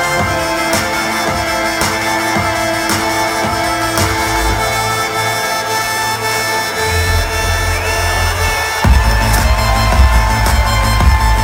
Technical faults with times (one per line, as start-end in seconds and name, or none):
0.00-11.44 sample clock jitter